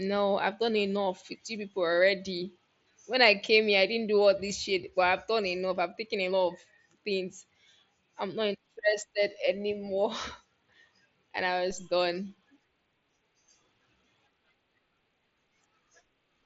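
At 11.71 s the speech has a DC step. The waveform's zero line jumps to a new offset in a single instant, the way it does when a converter recalibrates or an input carrying an offset is switched in. It comes through as a short low thump under the speech, which carries on with no gap and no change in level. The offset then slowly drains away, as it would through a 2 Hz high-pass. That unbroken continuity tells it apart from a dropout click, where the sound itself is interrupted. The speech arrives over an mSBC Bluetooth headset link and holds nothing above 7.7 kHz.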